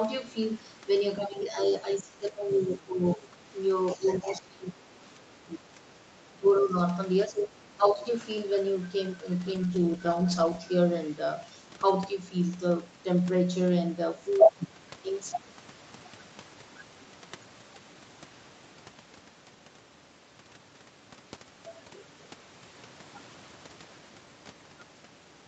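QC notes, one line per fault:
1.18–3.36, 3.95–4.82, 5.16–5.61, 6.31–6.77, 7.28–8.03 s: speech suppressed in double talk. The talker dips by roughly 15–20 dB in pieces, likely because the echo canceller couldn't separate near speech from loudspeaker echo.
1.22–1.40, 2.53–2.61, 6.60–6.65 s: other side's voice leaking through. Brief faint scraps, around 20–25 dB below the talker, likely loudspeaker echo the canceller left in the microphone signal.
9.46–11.21 s: call bitrate drop. Opus falls from 64 to 12 kbps for about 1.1 s, so coarser coding makes the sound rough and watery until it recovers.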